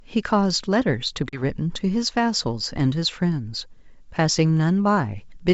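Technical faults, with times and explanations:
1.29–1.44 s, packet loss on an ADPCM call: a few packets vanish, leaving a hard 40 ms silent hole. The mismatched decoder predictor makes the speech return slightly distorted before settling.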